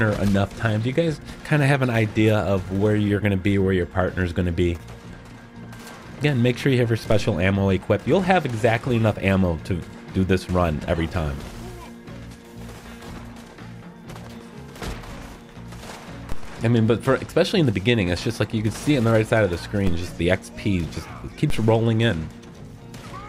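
At 7.12 s, 16.32 s, 19.87 s and 21.50 s the waveform's zero line jumps in a DC step of about -16 dBFS for the first two and about -15 dBFS for the last two. Each step lands as a dull low thump as the offset appears, then drains away through a roughly 2 Hz high-pass within a fraction of a second. Unlike a dropout or digital click, the sound itself continues intact through each thump.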